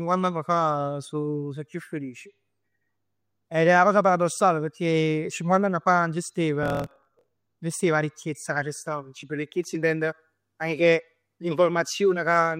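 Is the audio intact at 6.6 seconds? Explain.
No. Just after "cinquant'ann fa stev", from 6.61 to 7.33 s, a block size mismatch (truncated) throws away the tail of each block, which fits 1024-sample reads. The speech runs 1.12 times fast over a 43.1 Hz buzz, yet the timbre stays natural, unlike a sped-up resample.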